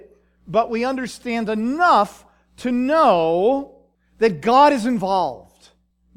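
No technical faults can be heard in this recording.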